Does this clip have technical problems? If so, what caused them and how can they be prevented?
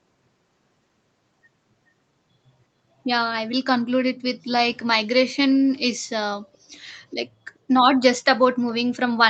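Yes. From 4.16 to 4.22 s there is an echo leak: a brief, very faint copy of the speech, delayed by about 0.43 s. The likely cause is a loudspeaker on the far side whose echo canceller let some sound back through. Using headphones or better echo cancellation prevents it.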